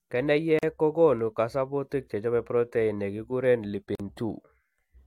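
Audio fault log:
0.59–0.63 s and 3.95–4.00 s, gap at a join of encoded pieces: the speech drops into abrupt, slightly smeared silences of 41 ms (just before "kokoonu kasubutik chechope protein") and 44 ms (just after "chechope protein ne kikuren"), then resumes where it stopped. Separately encoded segments were joined with their start-up delay and padded last frames left untrimmed.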